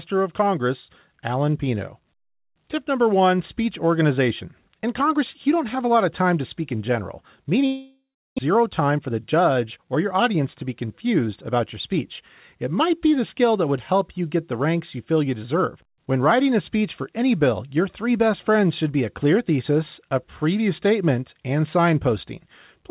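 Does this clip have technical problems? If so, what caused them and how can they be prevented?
Yes. Just after "to speak in general", from 7.66 to 8.40 s, the sound smears into a fading buzz and then about 0.34 s of silence. It returns with about half a second gone, the signature of a long network dropout, likely from packets that never arrived. Preventing it means a more stable network link with less congestion, or forward error correction to cover short losses.

From 8.47 to 10.41 s, just before "to be confused about", the speech runs hurried at about 110% speed with unchanged pitch. This is a jitter buffer speed-up: delayed packets arrived in a burst, and the receiver trimmed pitch-period slices, roughly a fifth of a second in total, to catch up. Reducing network jitter, or using adaptive buffering with gentler catch-up, prevents it.

The call's G.711 A-law path carries nothing above 4 kHz.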